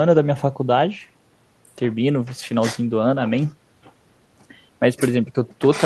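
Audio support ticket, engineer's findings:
No faults found on listening; the speech audio shows no audible defect requiring action.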